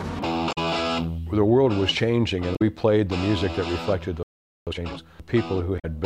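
At 0.49 to 0.58 s, 2.52 to 2.62 s and 5.76 to 5.85 s, damaged data in a compressed stream makes the decoder lose sync, giving brief glitches, each a short disruption in the spectrogram. From 4.23 to 4.67 s a playback stall leaves about 0.44 s of silence, a flat waveform gap, likely from the player starving for data. From 4.67 to 5.09 s, time-compressed catch-up plays the backlog at 2.0x speed with unchanged pitch, so spectral features look squeezed together in time.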